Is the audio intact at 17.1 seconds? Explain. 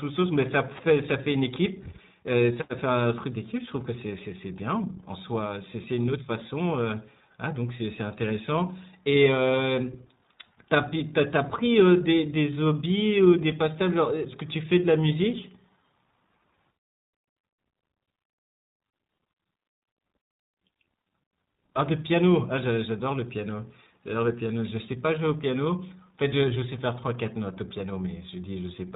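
No. At 17.1 s the speech carries iLBC codec damage, as it does for the whole clip. The codec codes each frame's excitation on its own, without relying on the previous frame, and the frame-to-frame texture fits 20 ms frames at iLBC's 15.2 kbps mode. Nothing above 4 kHz gets through, so the speech sounds dull and band-limited, and the coding leaves a plainly audible rough, synthetic grain on it.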